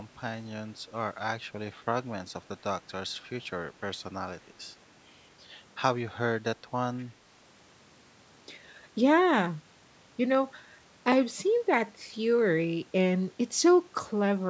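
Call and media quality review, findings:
Echo leak, 6.98–7.05 s: faint delayed copy of the speech, lagging about 243 ms, very low, well under the talker. Likely the far end's echo canceller letting some loudspeaker pickup through its mic. Call mic processing band tops out at 8 kHz.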